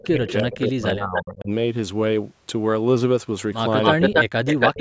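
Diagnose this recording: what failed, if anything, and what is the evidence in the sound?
Speech suppressed in double talk, at 0.00 to 1.51 s and again at 3.94 to 4.77 s, in the call processing stage. The talker's level dips hard in pieces, about 30 dB at its deepest in the first stretch, for roughly a second in total, and about 40 dB in the second, for about a third of a second. The likely cause is that the echo canceller could not tell the near talker from loudspeaker echo while both sides spoke, so it attenuated everything.

Echo leak, at 0.02 to 0.59 s, briefly at 1.17 to 1.22 s, and from 3.84 s to the end, also in call processing. A delayed copy of the speech comes back, 337 ms late in the first stretch and 279 ms late in the later two. It sits about 15 dB and then about 10 dB below the direct speech, and in the final stretch about 5 dB above it. This is likely residual echo that the far end's canceller failed to remove from its loudspeaker pickup.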